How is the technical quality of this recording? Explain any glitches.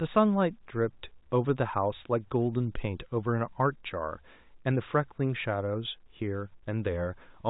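No glitches; the speech comes through without any faults.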